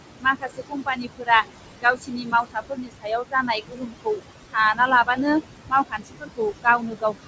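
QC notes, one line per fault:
throughout, noise suppressor artifacts: the background is being pushed down by about 20 dB frame by frame, so the room noise, only about 8 dB under the speech, pumps.
0.2–1.46 s, 1.82–4.21 s, 4.74–5.19 s, 5.89 s to end, speech cut by the noise suppressor: softer speech was taken for noise and dipped by about 16–21 dB, leaving it swallowed and faint.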